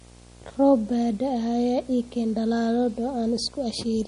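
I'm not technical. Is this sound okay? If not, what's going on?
No. Two problems run through the whole four seconds of this speech clip.

The first is video or display buzz. A screen or video cable has leaked its electrical signal into the audio wiring. The picture refreshes 59.94 times a second, and that rhythm turns into a low buzz under the speech, with a gritty hash on top. There is also a very high, thin whine near 15.7 kHz, tied to how the picture is drawn line by line. The buzz sits quieter than the speech.

The second is damage that is most likely from MP3 compression. To shrink the file, the encoder throws away parts of the sound it judges less important, and here it cut too much. Everything above 10.6 kHz is gone, so the speech loses its crisp top end. The damage is plainly audible: the sound turns watery and swirly, s sounds pick up metallic chirps, and the starts of sounds smear.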